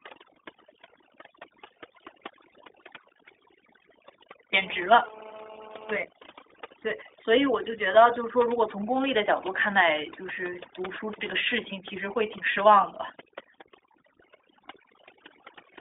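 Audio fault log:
Throughout, overdone noise removal: the background sinks to near silence dotted with twinkling specks. Noise reduction set far too strong is cutting individual frequency bands that fall near its noise estimate, taking quiet parts of the speech with them.
Throughout, iLBC codec: the speech is squeezed into a telephone band of about 300 Hz to 3.6 kHz, with nothing above 3.7 kHz, and carries a plainly rough, synthetic edge. The codec codes each 20 ms frame's excitation independently, which fits its 15.2 kbps mode.
4.53–5.97 s, GSM phone buzz: a hard, raspy buzz at 217 Hz, dense with harmonics and about 18 dB below the speech, runs steadily and ignores the speech entirely. A nearby 2G phone in a call transmits bursts 217 times a second, and the audio circuit rectifies them.
6.04–7.12 s, GSM signalling bursts: the steady buzz gives way to even ticks with a longer 217 Hz buzz twice a second, roughly 25 dB below the speech. 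The phone is still in its call but its user has gone silent, so it sends only short groups of bursts, which get rectified.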